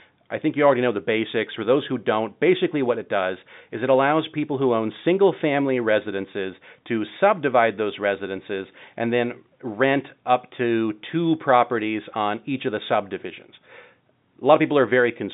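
No technical faults occur in this speech at any point, so there is nothing to place in time order.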